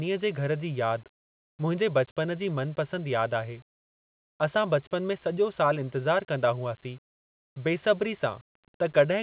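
No technical faults can be heard anywhere in this speech.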